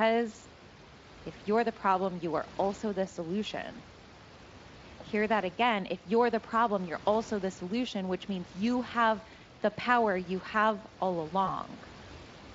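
A speech recording with VoIP packet loss concealed by the speech codec near its end. From 11.45 to 11.56 s the decoder fills a 20 ms hole, which fits a single lost frame, by stretching the preceding sound. That fill fades. The voice stays weak or distorted until the decoder recovers about 0.1 s later. Faint room noise sits about 20 dB below the speech, and light Speex coding colours the whole clip.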